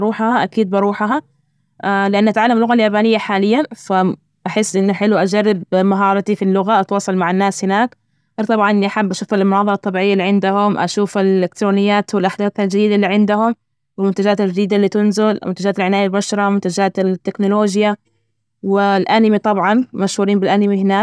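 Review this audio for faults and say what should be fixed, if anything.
Nothing needs fixing; no faults are audible.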